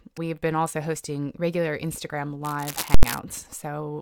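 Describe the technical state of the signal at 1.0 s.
At 1.0 s the speech signal is intact, with no audible fault at that point.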